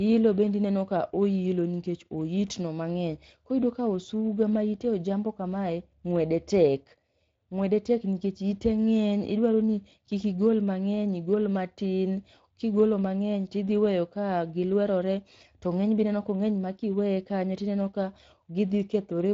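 From start to finish the speech has a plainly audible rough, hoarse grain, with a noisy texture riding on every syllable rather than clean tone. This is Speex codec damage. Speex is a CELP coder that rebuilds speech from a predicted spectral shape plus a coded excitation signal. Here the excitation is not described finely enough, so the buzz and breath of the voice come back grainy. The amount of damage fits a Speex setting of about 20 kbps.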